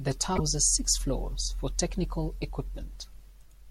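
A short speech recording carries damaged data in a compressed stream near its start. Corrupted bytes left the decoder unable to read its frames, so it lost sync and hunted for the next valid header, leaving a brief glitch from 0.35 to 0.40 s.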